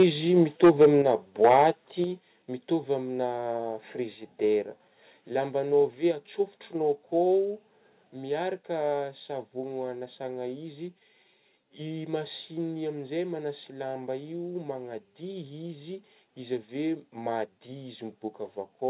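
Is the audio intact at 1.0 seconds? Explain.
No. From 0.37 to 1.1 s the microphone input was likely set too high, driving peaks about 8 dB past the converter's ceiling. Roughly 7 percent of samples are flattened, giving the loudest speech a harsh, crackling edge right through 1.0 s.

Within that stretch, at 1.02 s, the call software likely reacted by lowering the microphone's input volume by 5 dB in a single step, so both the speech and the background drop abruptly in level.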